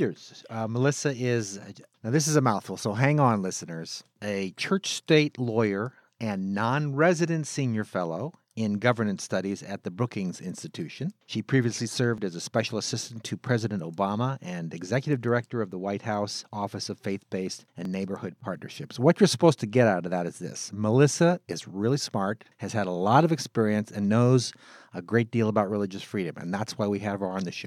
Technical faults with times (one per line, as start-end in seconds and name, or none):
12.18 dropped buffer (overrun)
17.85 dropped buffer (overrun)